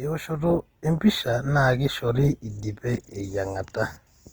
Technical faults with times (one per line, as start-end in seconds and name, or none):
0.00-4.33 Opus compression